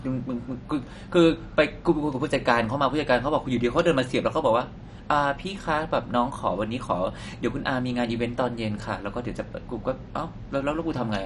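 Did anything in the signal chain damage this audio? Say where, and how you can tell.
Yes: dull, gurgling speech throughout with nothing above 11.3 kHz points to the codec stage, likely MP2 compression starving sub-bands at a low bitrate, roughly 48 kbps.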